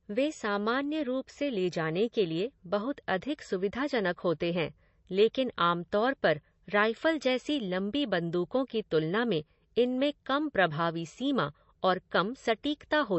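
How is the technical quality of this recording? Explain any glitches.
The technical quality is limited by one fault, present for the whole clip: MP3 compression artefacts, plainly audible. Nothing reaches above about 7.9 kHz, a hard treble cutoff that fits a low bitrate around 32 kbps. With so few bits, the encoder discards the top band and drops weak spectral lines that flicker between frames. The speech sounds dull and watery, with a swirling texture and metallic chirps on sibilants. The likely cause is low-bitrate MP3 encoding.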